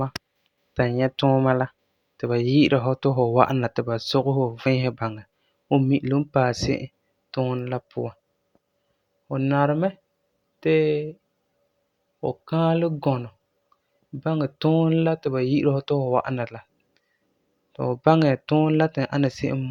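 Listening through the speech in full, nothing stood out as a technical fault at any point.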